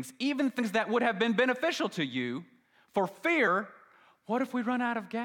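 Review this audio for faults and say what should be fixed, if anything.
Compressed frames were skipped twice: at 0.58 s, just before "that would have been", and at 3.46 s, just after "beneficial to you for", the decoder lost or rejected a run of frames. Each gap points to about four 23.2 ms frames, so the speech jumps ahead by roughly a tenth of a second and a short stretch is missing. To prevent this, verify file integrity and use error-protected transport so damaged frames are resent before decoding.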